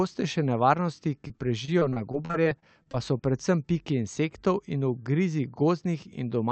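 From 1.27 to 3.21 s, repeated packet loss (robotic sound) chops the speech into fragments as over a dozen short holes, the longest 37 ms, are bridged by stretching earlier sound. On a spectrogram this shows as smeared, repeated frames below a hard 8 kHz ceiling, a cut-off that points to a call codec.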